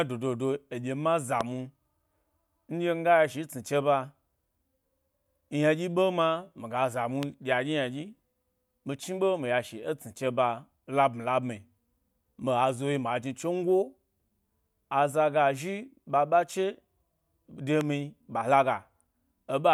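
Speech carries three loud pops, at 1.41 s, 7.23 s and 17.81 s, each a single sharp thump about 20 ms long and up to roughly 15 dB above the voice, likely from an electrical pulse such as a plug, switch or static discharge. Each appears as a tall spike on the waveform and a thin vertical broadband stripe on a spectrogram.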